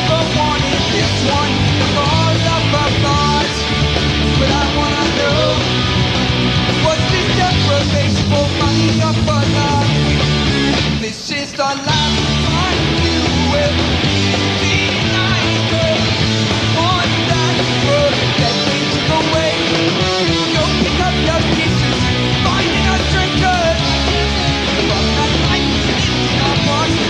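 No technical faults can be heard anywhere in it.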